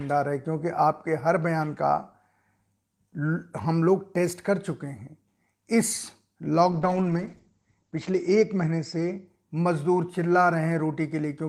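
At 6.73 s the speech turns rough and muffled. This is a call bitrate drop. The connection's bandwidth estimate fell, so the encoder had to squeeze the audio into far fewer bits. The coarseness fits a fall from 32 kbps to around 10 kbps. The top of the spectrum is also cut, with the band closing down to about 8 kHz. The worst stretch lasts about 1.01 s. Clarity returns by 9.55 s as the rate recovers.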